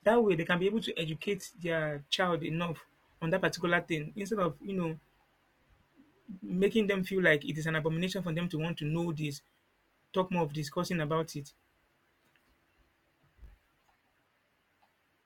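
From 0.0 to 2.0 s, an adaptive stream starting at a low bitrate gives dull, synthetic-sounding treble, fitting roughly 20 kbit/s HE-AAC. Quality jumps without any gap just before "child enough on that," as it steps up to 96 kbit/s AAC-LC.

Throughout, a filter restarted on every block adds a 50 Hz buzz. Unlike mains hum, it rises and falls with the speech level, because each block starts with its own transient.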